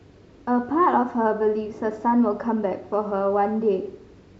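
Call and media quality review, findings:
No audible faults found in this speech recording.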